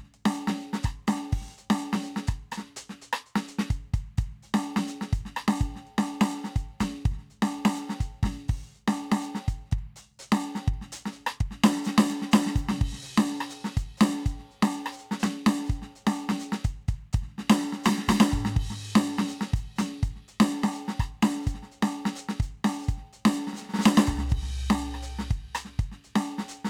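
A short piece of music, and nothing in it stands out as a technical problem.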